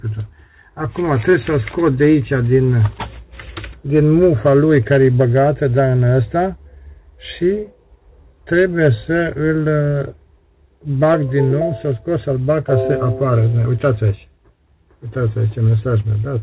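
No technical faults can be heard in this audio.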